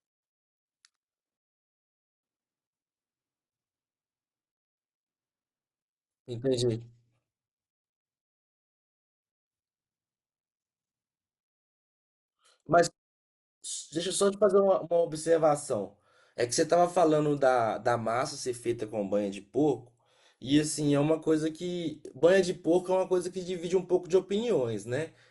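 At 1.37 s the speech halts in a rebuffering stall: the player has run through its downloaded audio and waits for more, leaving silence until 2.23 s, roughly 0.86 s of added time. What separates this from a packet-loss dropout is the restart. The speech picks up at exactly the point where it broke off, with nothing skipped or clipped, so the sentence is merely delayed rather than missing a piece.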